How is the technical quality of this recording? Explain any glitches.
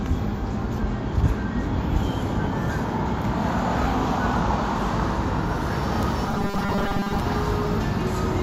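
A rigid, metallic buzz is heard from 6.28 to 7.20 s. This is the robotic sound from repeated short buffers. Audio likely arrived too seldom, so the last 5 ms fragment was replayed in place of most of the real signal, fixing a 200 Hz buzz.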